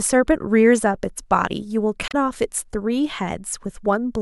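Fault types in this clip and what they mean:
Damaged data in a compressed stream: a short stretch of the encoded speech arrives corrupted, so the decoder cannot parse those frames correctly, loses its place in the bitstream and has to hunt for the next valid frame header before output resumes. In this clip it shows as a brief glitch from about 2.08 to 2.14 s, roughly 66 ms, where the speech is disrupted before normal audio returns.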